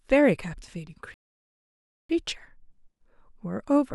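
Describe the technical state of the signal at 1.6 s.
At 1.6 s the speech is inside a playback stall, silent from 1.14 to 2.09 s. The player likely ran short of data. Sound resumes after about 0.95 s.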